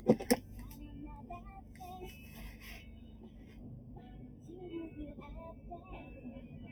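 One channel arrives a fraction of a millisecond late, roughly 0.4 ms, and the two are summed to mono. This channel delay (comb filtering) cancels shared content at evenly spaced frequencies, the first notch near 1.5 kHz, so the whole clip sounds hollow and phasey.

From 4.3 to 4.45 s, the noise suppressor mistook part of the sound for noise and pulled it down further than its surroundings. This sound cut by the noise suppressor lasts about 150 ms and dips by about 4 dB, briefly sinking the level.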